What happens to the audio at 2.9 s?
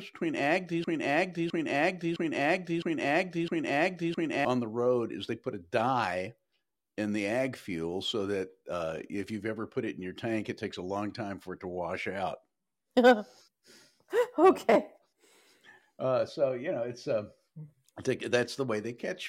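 A broken-record loop covers 2.9 s, running from 0.84 to 4.45 s, between "between ag" and "on the road is". One 660 ms fragment repeats identically five times back to back, likely from a stalled player or stream resending its last buffered piece, so the intended speech there is lost.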